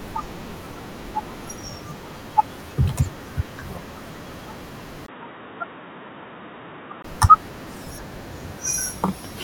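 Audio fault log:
5.06–7.04 s, input switched to a poorer device: after a 20 ms gap the speech turns dull and boxy, losing everything above 3.8 kHz, with new background noise about 30 dB down and similar loudness. The likely cause is another microphone or a headset call profile. Clarity returns at 7.04 s.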